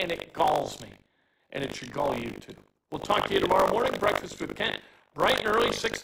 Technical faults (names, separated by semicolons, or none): buffer tearing